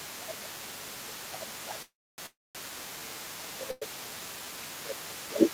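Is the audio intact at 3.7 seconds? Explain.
No. At 3.7 seconds three faults overlap.

A call audio freeze runs from 3.71 to 3.83 s. For about 105 ms the sound does not advance; the last fragment is stretched into a fading buzz or hiss rather than dropping to silence. When the audio resumes, it picks up exactly where it stopped, so nothing is lost, but everything after is pushed about 105 ms later. The likely cause is packets held up in transit while the jitter buffer ran dry. Unlike packet loss, which cuts out content, this freeze only inserts a gap.

The other side's voice leaking through is present here as well, as it is for the whole clip. A second voice can be heard faintly, well below the main speech. It likely comes from the far end playing on a loudspeaker, with the echo canceller leaving part of it in the microphone signal. It is a separate voice, not a delayed copy of the talker, which distinguishes it from room reverberation.

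Speech suppressed in double talk also affects this moment, as it does from 0.15 s to the end. While the other voice is present, the talker's speech dips, at its deepest by a large amount. This is likely the echo canceller turning everything down because it could not separate the talker from the echo. Because the dips follow the other side's activity, they differ from a steady level loss or network dropouts.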